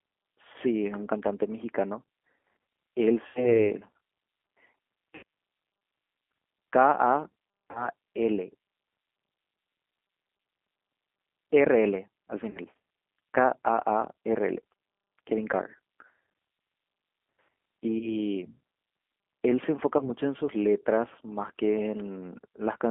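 G.729 codec damage runs through the whole speech recording: the 8 kbit/s coder rebuilds each 10 ms frame from a vocal tract filter, pitch predictor and sparse pulses, leaving the voice plainly rough and synthetic, confined to a 250 Hz to 3.4 kHz telephone band. VoIP packet loss concealed by the speech codec appears at 0.52–0.56, 3.27–3.58, 5.15–5.23, 7.71–7.89, 12.51–12.58, 17.99–18.28 and 19.99–20.10 s. The decoder stretches its last pitch and filter into a fading buzzy tone or coloured noise across gaps of 20, 80, 80, 40, 40, 20 and 20 ms, which fits one to four lost packets, and stays weak afterwards while the frames recover.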